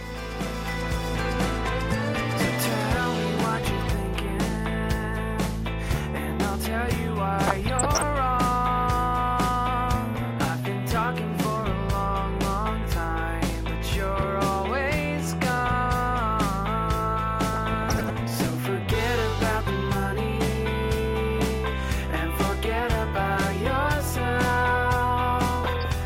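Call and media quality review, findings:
DAB burbling, 7.42–8.02 s, 17.53–18.16 s, 25.64–25.85 s: noise blips and level jumps in sub-bands over the audio. Weak reception, residual bit errors corrupting MP2 samples and scale factors.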